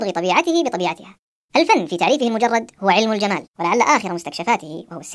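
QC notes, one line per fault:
Throughout: wrong sample rate, speech plays 1.5 times fast and about 7 semitones high, fitting 16 kHz audio played at 24 kHz; spectrogram formants and harmonics stretch upward.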